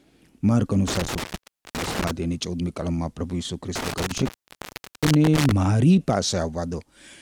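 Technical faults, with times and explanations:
0.88–2.11 s and 3.76–5.52 s, intermittent contact: the speech drops out twice, for about 0.51 s in the first span and about 0.74 s in the second, with crackle as each gap opens and closes and only faint hiss in between. A loose cable or plug is briefly losing its connection, so the signal path breaks. The scraping contact makes the crackle at the edges, and the hiss is all that remains while the line is open.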